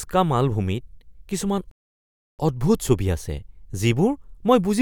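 At 1.71 s, right after "মালভূমিত কিছুমান", a rebuffering stall cuts the speech to silence until 2.39 s. Playback starved for data, then resumed exactly where it stopped, adding about 0.68 s.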